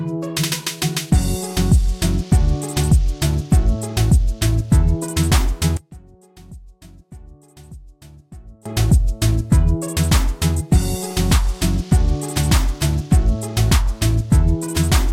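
From 5.77 to 8.66 s, level falls about 24 dB, likely one channel inverted cancelling in mono; the waveform collapses and the spectrogram fades across the band.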